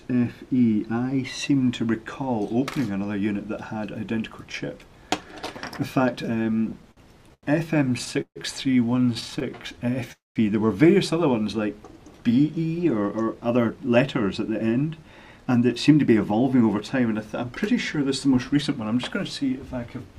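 From 6.71 to 8.38 s the audio shows repeated stalls (stutter). Packets were arriving late or more slowly than playback consumed them, so the jitter buffer kept running dry. Ten separate gaps are filled by continuing the preceding sound, 357 ms in total and about a fifth of that span. The longest gap is 147 ms. Nothing is skipped, but the passage drags and stutters, with the longer holds fading rather than simply extending.

A jitter buffer slow-down runs from 9.14 to 10.09 s. With the buffer low, the receiver built up a reserve by repeating single pitch periods and fragments of pauses many times over. This adds 109 ms, so the sound plays at roughly 89% speed at unchanged pitch. Sounds are drawn out, and a faint warble can come through where the repetitions stack up.

Inside that stretch, between 9.39 and 9.43 s, there is a short stall from a late packet. The expected packet was not in the buffer on time, so the last sound was held for 19 ms until it arrived, and playback resumed from the same point. 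The effect is a brief sustain with a slight buzz or dip. No audio is lost, and the delay grows by the same 19 ms.

From 10.12 to 10.38 s comes a call audio freeze, with packets held up somewhere in transit the likely cause. The buffer emptied and the receiver extended the last sound as a decaying buzz or hiss. For about 180 ms of the 235 ms it covers, that sound falls to silence, and then the audio picks up where it stopped. The gap is inserted rather than replacing anything, and the delay increases by 235 ms.

From 13.02 to 16.98 s there is a jitter buffer speed-up. The buffer was holding more than its target, consistent with delayed packets landing together, and the receiver trimmed that excess by cutting out short pieces of one or a few pitch periods in rapid succession. Around 0.4 s is removed in all, so the audio runs at about 110% speed at the same pitch and sounds noticeably hurried across those four seconds.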